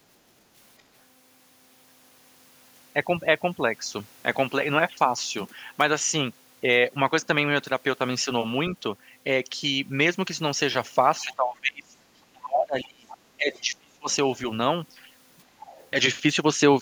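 From 0.19 to 0.56 s the room background is gated by the echo canceller: it clamps the microphone while the loudspeaker plays, so the ambience dips by about 7 dB for roughly 300 ms. On a waveform the noise floor visibly narrows, and a spectrogram shows a pale, broadband notch across the background.

Between 11.24 and 14.09 s the talker's speech is suppressed in double talk, most likely because both sides spoke at once and the canceller turned everything down. For around 2 s in total, the voice sinks by as much as roughly 30 dB. The waveform shows the envelope dropping, and the spectrogram shows the voice's energy fading.

The other side's voice leaks through at 12.82–13.17 s, 13.55–13.60 s, 14.11–14.38 s and 15.37–15.90 s. The likely cause is residual loudspeaker echo that the canceller failed to remove. These faint scraps sit roughly 20 to 30 dB below the talker and appear as weak, separate harmonic traces on the spectrogram.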